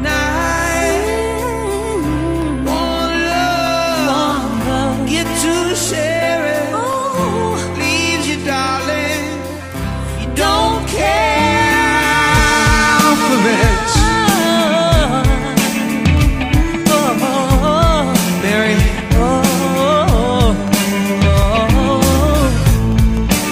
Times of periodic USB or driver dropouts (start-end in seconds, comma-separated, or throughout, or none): 0.17-23.42